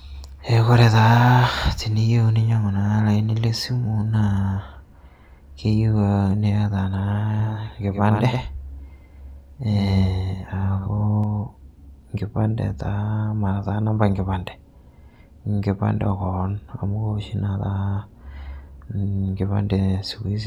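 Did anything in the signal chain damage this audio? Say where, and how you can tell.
Yes, there's a doubled audio track from 7.40 to 11.24 s: a dry copy trails about a tenth of a second behind, a few dB quieter, starting and stopping abruptly. It's likely a second, slower capture path.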